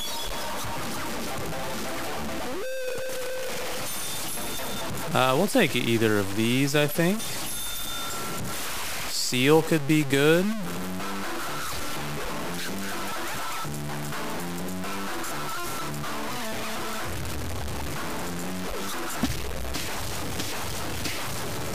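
Throughout, gritty distortion tracks the sound with noise nearly as loud as the signal, likely low bit depth without dither, fitting 5-bit truncation; waveforms show stair-steps, spectrograms a smeared noise floor.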